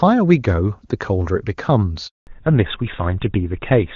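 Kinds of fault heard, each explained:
handover gap: The call was passed between networks, and no speech frames came through during the switch. At 2.07 s the sound fades out within a few tens of milliseconds. A 200 ms silence follows until the new link picks up at 2.27 s.
fallback to narrowband: After the handover the call drops from HD Voice to an older narrowband codec, which fits GSM full rate. From 2.27 s to the end, nothing above 4 kHz remains. The sound turns duller and rougher than before the gap.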